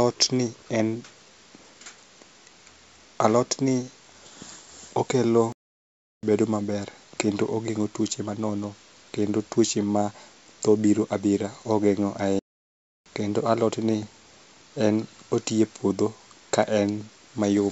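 At 5.52 s the speech cuts out mid-flow and stays silent until 6.23 s, about 0.71 s; a second gap runs from 12.39 to 13.06 s, about 0.67 s. Both are playback stalls, likely the player running short of data or being blocked before resuming. On a waveform each shows as a flat line between abruptly truncated and restarted segments. On a spectrogram it is a clean vertical blank band across the whole band-limited range, which ends at about 7 kHz, consistent with a wideband call codec such as G.722.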